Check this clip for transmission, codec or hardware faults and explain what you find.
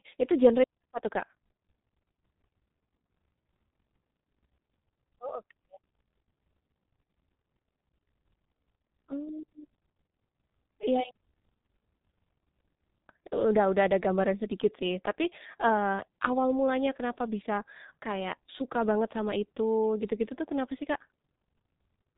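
The whole recording has passed through a G.723.1 codec. A low-rate telephony coder rebuilt the speech from coarse 30 ms frames with a slowly updated voice model, consistent with a bitrate near 6 kbit/s. Nothing above 3.8 kHz survives, so the speech sounds muffled and hoarse, and its consonants are heavily smeared.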